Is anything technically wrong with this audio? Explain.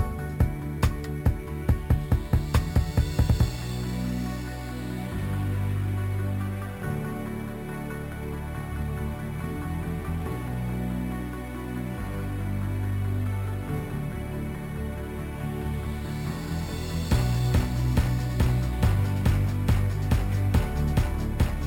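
Yes. Throughout, a bright metallic fizz tracks the sound's level, sitting between 6 and 12 kHz about 26 dB down. This is imaging from sample-and-hold upsampling. Each sample was repeated without smoothing to reach 44.1 kHz, which fits a 12 kHz source, leaving mirrored spectral copies above 6 kHz.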